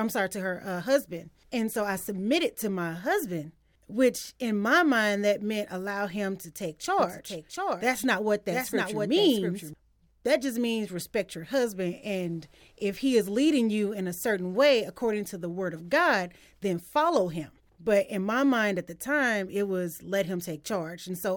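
From 6.99 s to 9.73 s the speech is accompanied by a second, somewhat quieter copy of itself, trailing around 0.7 s behind, so every phrase is heard again over the following one. The echo is full-band and dry, with no decay or room colour, and it switches on and off abruptly at those edges. This is a doubled audio track, likely from the same signal reaching the mix twice, once through a slower path.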